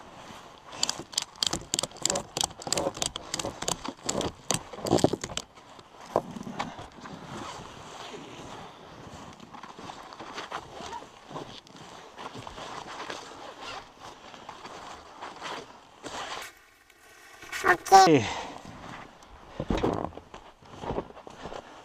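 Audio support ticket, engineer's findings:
Robotic buzz at about 188 Hz, no clear octave shift, 16.42 to 18.07 s. Probable component: channel deinterleave stage. Planar audio read as interleaved. Each 5.33 ms block replays left-then-right at double speed, fitting a 256-sample buffer.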